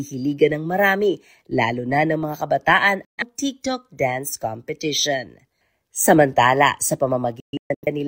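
At 3.05 s, just after "na ng mga kabataan", a digital broadcast dropout mutes the speech. The receiver lost frames and cut to silence for about 128 ms, with a 3 ms fade. At 7.40 to 7.88 s, several short holes totalling about 341 ms recur. The longest is 128 ms. The missing speech is gone.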